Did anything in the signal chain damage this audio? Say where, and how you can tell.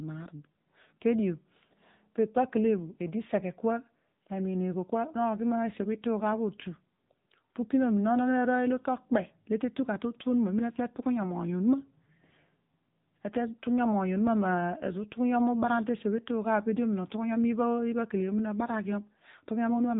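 Yes, the codec stage: AMR narrowband mobile codec damage throughout, nothing above 3.8 kHz and a buzzy, synthetic edge that fits a low mode around 8 kbps.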